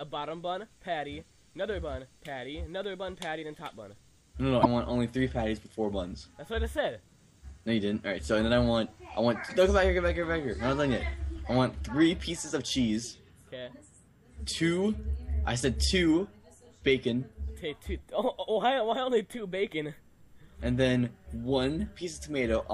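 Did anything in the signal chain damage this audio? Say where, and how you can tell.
Yes, at the codec stage. From 4.61 to 4.66 s the audio skips forward with a brief disruption lasting about two 26.1 ms frames. This is likely a broken MP3 bit reservoir: after missing frames, the next frame's back-pointer reads unrelated bytes.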